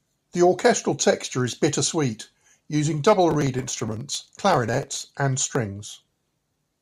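From 3.31 s to 5.01 s, just after "is bittersweet using double", the speech carries processor overload crackle. The processing could not keep pace with its very short audio buffers, each well under a millisecond, and around a hundred of them were missed across this stretch. Each missed buffer was skipped outright, cutting a small hard-edged hole in the signal. The rapid run of these holes is heard as a gritty, tearing crackle over the speech that stops at 5.01 s.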